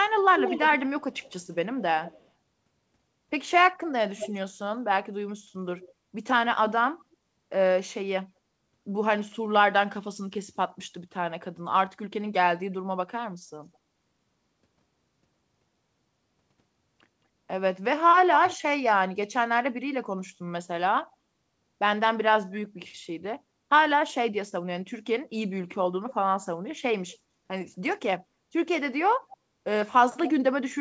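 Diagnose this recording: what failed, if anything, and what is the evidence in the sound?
The failure is in call processing, as an echo leak. A delayed copy of the speech trails the original from 0.02 to 2.28 s, nearly as loud as the direct sound. It comes back quieter at 3.88–4.33 s, then as faint scraps at 5.77–5.92 s and 29.32–29.37 s. The lag runs 183–193 ms early on and stretches to 244 ms at the end. The likely cause is that one side's echo canceller didn't fully remove its loudspeaker pickup, so the residue went back down the line.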